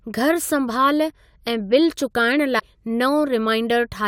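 It's a short speech clip with one glitch from 2.56 to 2.63 s, roughly 76 ms of garbled chirp or blip. That's damaged data in a compressed stream: some of the encoded bytes in that stretch are corrupted, so the decoder misreads those frames, loses its place in the bitstream and has to hunt for the next valid frame header before normal decoding resumes.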